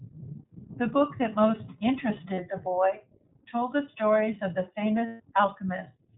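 The speech passes throughout through the iLBC codec, which fits 20 ms frames at around 15.2 kbps: everything above 4 kHz is gone, leaving clear but rough, slightly synthetic speech. Lost iLBC frames follow at 2.34 to 2.40 s (40 ms) and 5.06 to 5.21 s (140 ms). The decoder repeats the last pitch cycle mixed with noise, producing a held, buzzy vowel that fades across the longer gap before the voice snaps back.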